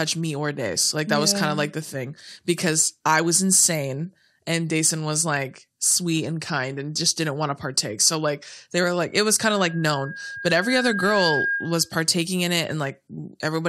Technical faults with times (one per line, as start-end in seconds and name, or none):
9.41-11.93 loudspeaker feedback squeal